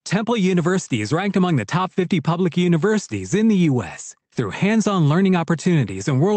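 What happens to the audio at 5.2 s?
Nothing goes wrong at 5.2 s: the speech carries straight through that moment with no dropout, glitch or distortion.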